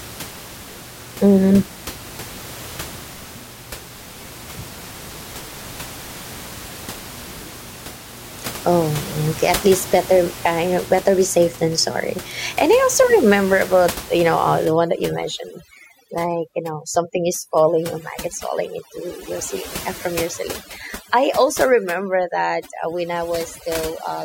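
From 14.65 s to the end, overdone noise removal sets in: the noise reducer is pushed far too hard, cutting frequency bands near its noise estimate along with quieter speech detail, so the room noise, about 15 dB below the speech, collapses into twinkling specks.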